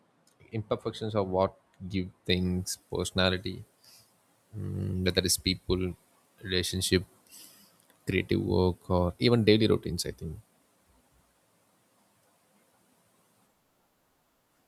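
From 2.29 s, just after "imperfections are what give", to the end, the speech has pre-emphasis left on. The treble lift matches a 75 µs FM pre-emphasis curve, and the matching de-emphasis was never applied, so high frequencies sit about 13 dB above 1 kHz at 10 kHz. The sound turns thin, bright and hissy on sibilants. A generic treble boost would have an arbitrary shape, but this lift rises steadily from around 2 kHz, the 75 µs turnover, which points to a missing de-emphasis stage.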